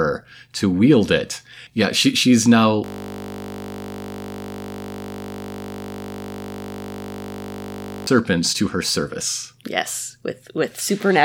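A speech clip with a system hang loop from 2.84 s to 8.07 s, right after "yeah she she's now" and before "to her service". The output froze on a 20 ms slice of audio and replayed it about 260 times, so the speech becomes a steady buzz at 50 Hz. On a waveform this appears as one identical 20 ms cycle tiled across the gap. On a spectrogram it shows as evenly spaced horizontal harmonics at multiples of 50 Hz, frozen in place until speech resumes.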